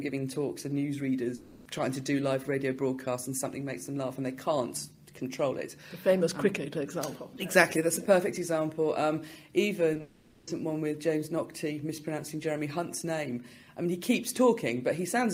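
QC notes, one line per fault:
1.35–1.67 s, long network dropout: about 0.30 s of audio is missing, and the gap never drops to silence. It is bridged throughout by a synthetic continuation of the preceding sound that decays into a buzzy, hissy tail before the real signal resumes. The likely cause is a stall in packet arrival long enough that the receiver's concealment ran over the whole gap, and the lost material is skipped, not played late.
9.93–10.01 s, short concealed packet loss: two back-to-back losses of about 20 ms each, at 9.93 s and 9.97 s, heard as a brief smear and wobble. The decoder filled each hole by extending the last waveform, tracking its pitch where the sound was periodic and substituting shaped noise where it was not.
10.01–10.49 s, long network dropout: this follows immediately on the two short losses, and about 0.46 s of audio goes missing. As before there is no true silence. 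The concealment keeps extrapolating the prior sound, which thins into a fading buzz and noise floor until the stream returns with the intervening material gone. The run of losses escalating into a half-second gap points to a network outage, not decoder trouble.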